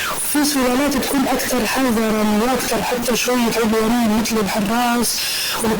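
From start to finish the speech carries a distortion, and the pauses fill with steady noise instead of falling silent. That points to a stuck bit, likely one data bit held fixed. Unlike clipping, the damage reaches quiet passages, not only peaks.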